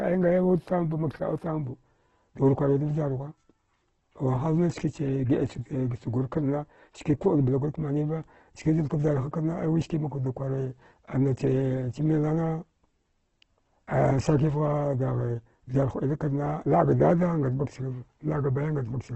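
From start to finish the speech sounds grainy and rough, with nothing above about 8.4 kHz, so it's dull up top. That's likely Opus compression in its CELT music mode, starved of bits, which fits a rate near 12 kbps, filling bands with folded or noisy content.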